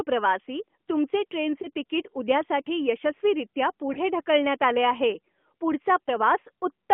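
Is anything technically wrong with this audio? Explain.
Yes. Lost AMR speech frames occur three times in this narrowband speech: 1.62 to 1.68 s, just after "प्रवासी तुमचे"; 3.94 to 3.99 s, just before "ढकलण्यात आले आहे"; and 6.04 to 6.10 s. Each points to a single 20 ms frame failing its checksum, so the decoder repeated the previous pitch and vocal tract settings at reduced gain, heard as a brief dip or warble.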